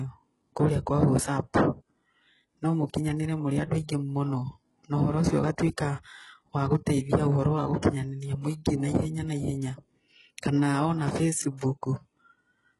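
From start to finish, the treble of this speech sounds gritty and metallic, and s sounds come out lispy. Nothing is heard above 11.5 kHz. This is likely HE-AAC compression at a very low bitrate, near 12 kbps. The upper bands are rebuilt from copied lower ones, so their harmonics never line up.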